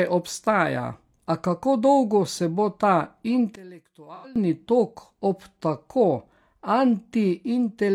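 One channel inverted, from 3.56 to 4.36 s: the speech suddenly drops by about 21 dB to a faint copy. This is likely one stereo channel with reversed polarity, so the centred voice cancels in the mono sum and only the faint inter-channel difference survives.

AAC frame loss with concealment, from 4.15 to 4.26 s, inside that faint stretch and just before "tok ob tako": for about 85 ms, consistent with two lost frames, the decoder patches the gap from the previous spectrum, leaving a brief smeared, noisy blur.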